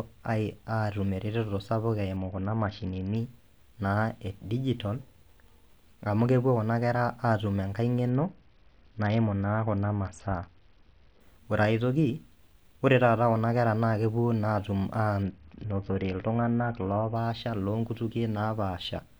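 Three Bluetooth SBC bit pool drops break up this speech, at 2.17 to 3.16 s, 8.09 to 11.20 s (ending just before "ore aetoki"), and 15.22 to 17.15 s. In each, the treble dulls and a gritty quantisation noise rises, which points to the bit pool falling from about 31 to 7, roughly 61 kbps, as the link congested. Unlike a switch to a narrowband call profile, the sound never cuts out, and full brightness returns when the rate recovers.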